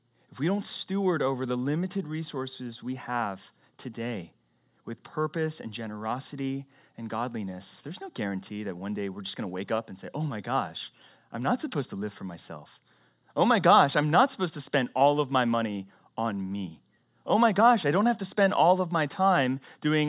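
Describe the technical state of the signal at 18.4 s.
At 18.4 s the signal is intact, with no dropout, distortion, glitch or other technical fault to be heard at that moment.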